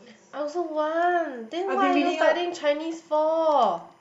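From about 0.62 s right through to the end, there's timecode bleed sitting under the speech. Linear timecode from a nearby track or cable has leaked into the audio path. Its square wave flips between two pitches, around 1 kHz and 2 kHz, and the code runs at 25 frames per second. You hear it as a faint, steady chirpy warble, roughly 40 dB below the speech. It's quiet but constant.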